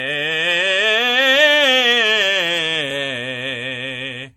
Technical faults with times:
0.00-4.37 generation loss

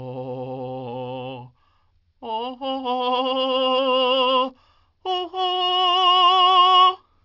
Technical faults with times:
0.00-7.24 aliasing

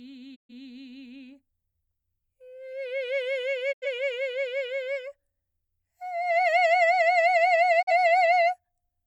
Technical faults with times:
0.34-0.51 digital broadcast dropout
3.71-3.87 digital broadcast dropout
7.81-7.92 digital broadcast dropout

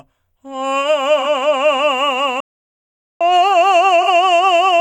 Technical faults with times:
1.20-1.26 AAC frame loss with concealment
2.40-3.21 playback stall
4.02-4.08 AAC frame loss with concealment

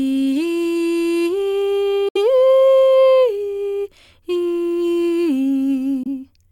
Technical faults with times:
2.08-2.17 Bluetooth dropout
6.03-6.07 Bluetooth dropout

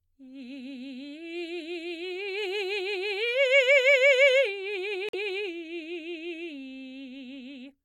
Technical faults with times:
5.09-5.15 corrupt frame muted

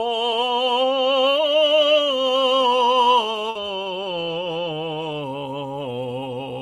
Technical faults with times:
3.49-3.58 burst of packet loss

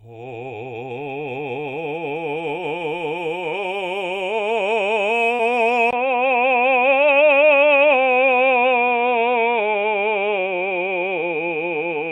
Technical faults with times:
5.35-5.41 short concealed packet loss
5.91-12.12 input switched to a poorer device

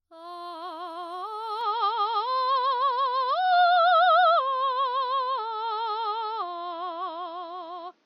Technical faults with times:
1.61-8.06 input switched to a poorer device

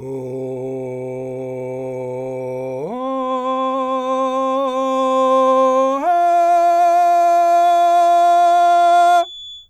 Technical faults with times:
7.53-9.69 feedback whistle

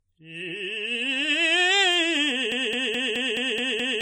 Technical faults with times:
0.00-4.01 generation loss
2.52-4.01 broken-record loop

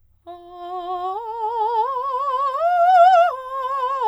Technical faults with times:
none

